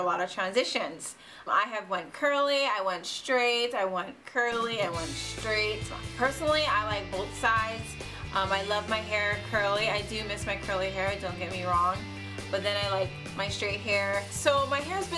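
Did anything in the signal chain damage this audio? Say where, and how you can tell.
No, nothing along the signal chain left an audible mark on this audio, and its level, continuity and timing hold steady throughout.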